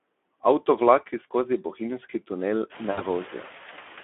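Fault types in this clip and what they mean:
Noise suppressor artifacts: A suppressor is pulling down whatever it judges to be steady background, band by band, by about 8 dB. You can hear the noise dip in the gaps and swell back under the talking. The room noise comes up at around two and a half seconds.
Speex codec: The speech runs through Speex at a low-ish setting, which fits something around 11 kbps. The codec damage is plainly audible: the voice comes out grainy and hoarse because there aren't many bits left to model the excitation properly. The band is narrow, roughly 250 Hz to 3.5 kHz, so it has that thin, boxed-in telephone sound with nothing up top.
VoIP packet loss concealed by the speech codec: At 2.92 to 3.05 s there's a short gap, about 60 ms of audio, which fits three lost 20 ms frames. The decoder fills it by stretching out the last bit of pitch and spectral shape and fading it down, so you hear a brief stretched-out sound instead of real speech. 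The voice stays weak and off just after, until the decoder recovers.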